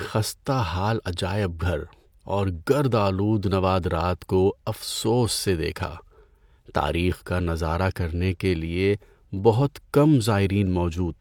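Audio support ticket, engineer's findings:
No audible fault found in the speech clip on review; nothing to trace to any component, ticket can close without action.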